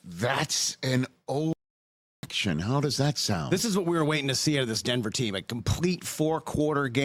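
At 1.53 s the sound cuts off mid-flow and stays silent until 2.23 s, a playback stall of about 0.70 s, likely from the player running out of data or its thread being blocked. The waveform drops to a flat line there, and the spectrogram shows a blank vertical band.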